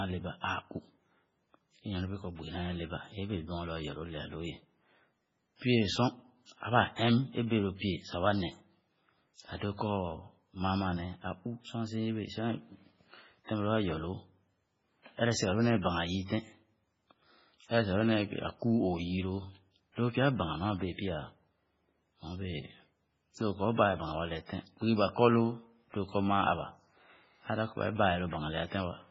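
MP3 compression, throughout: speech has nothing above 7.5 kHz and sounds heavily watery and swirly, likely from an encoder starved of bits, fitting roughly 16 kbps.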